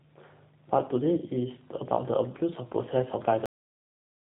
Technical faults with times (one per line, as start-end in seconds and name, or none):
0.00-4.29 G.729 codec
3.46-4.29 cut-off end